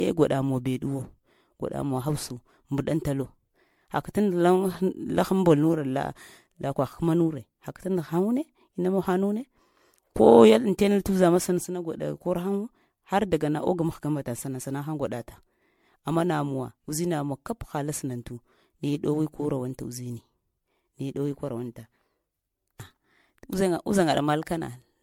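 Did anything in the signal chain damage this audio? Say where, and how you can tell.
Yes, damage from generation loss at the codec stage runs through the whole clip: the speech sounds swirly, hollow and smeared, with blurred consonant attacks and nothing above 19.9 kHz. The likely cause is about seven repeated decode and re-encode passes through what fits a 96 kbit/s MP3 chain, each re-quantising on a shifted frame grid.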